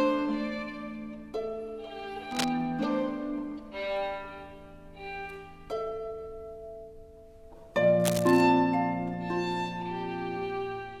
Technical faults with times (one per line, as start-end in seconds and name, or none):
2.27-2.48 cable scratch noise
7.99-8.42 cable scratch noise